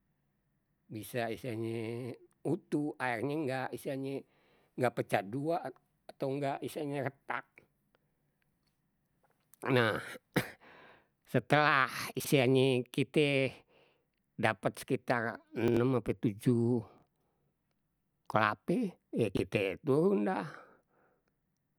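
Chunks out of order occur four times in this speech. At 12.20 to 12.27 s, a short slice plays after the audio that should follow it. The same jumble returns at 15.68 to 15.77 s, between "dapet sekitar" and "ape tujuh". It comes again at 16.98 to 17.02 s, just after "ape tujuh", and at 19.35 to 19.39 s, between "kelape ya" and "turun dah". Each moment sounds garbled. The slices are about 21 ms long.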